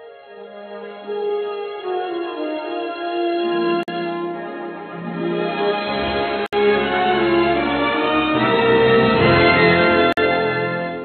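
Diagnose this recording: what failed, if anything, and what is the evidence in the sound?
The codec stage failed at joins between separately encoded pieces. Short silences open in continuous sound at 3.83 s, 6.46 s and 10.13 s, lasting 48, 65 and 47 ms. Their edges are smeared. The sound resumes where it stopped. Each gap is untrimmed encoder delay plus end-frame padding.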